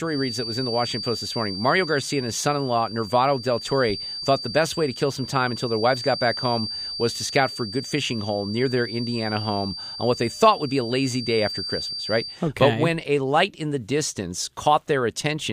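From the start until 12.42 s, a feedback whistle sits at 4.7 kHz, about 10 dB under the speech, likely from a loudspeaker-to-microphone loop held just short of runaway. Unlike a howl, it never builds into runaway; unlike mains hum, it is thin, high and swells and fades slowly.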